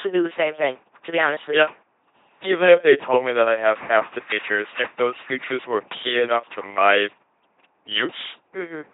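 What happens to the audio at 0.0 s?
From 0.0 s the speech is already passing through an LPC-10 vocoder for the whole clip. Each frame is resynthesised as either pulse-train buzz or noise through a short all-pole filter, giving a heavily damaged, mechanical robot voice with nothing above 3.8 kHz, consistent with a 2.4 kbit/s coder.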